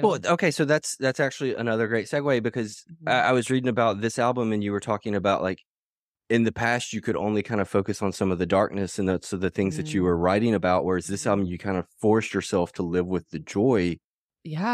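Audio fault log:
No audio faults detected.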